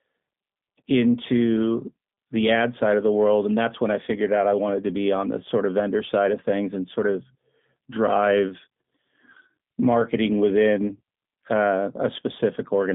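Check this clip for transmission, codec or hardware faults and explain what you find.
One codec fault runs through the whole clip.

G.729 codec, throughout: speech is resynthesised from a vocal tract model and sparse pulses, as at 8 kbit/s, leaving nothing above 3.7 kHz and a plainly rough, synthetic tone.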